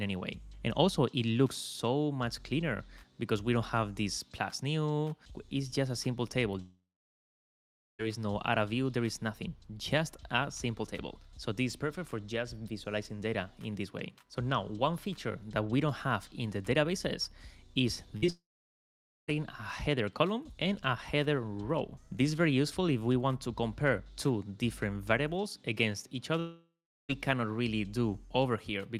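From 6.61 to 8.01 s the sound stops for about 1.4 s, most of it silence after a brief fading continuation, likely a long network dropout: far too long to be a burst loss. At 18.17 to 18.25 s a burst of packet loss holds the last sound as a fading buzz or hiss for about 55 ms before resuming further on. From 18.27 to 18.30 s, short concealed packet loss leaves only a brief smear, too brief to fade out. A further gap from 18.30 to 19.36 s, nearly 1 s and mostly silent, is likely another long dropout, as is the 0.7 s gap from 26.40 to 27.11 s.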